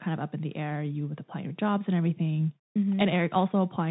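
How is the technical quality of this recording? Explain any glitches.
The quality is held back by one fault running the whole way through: the Bluetooth CVSD headset codec. Nothing above 4 kHz survives, so the speech sounds boxy. Its one-bit up-or-down steps, which fit a 64 kbps link, can't track loud high sounds, leaving scratchy s sounds and a granular hiss underneath.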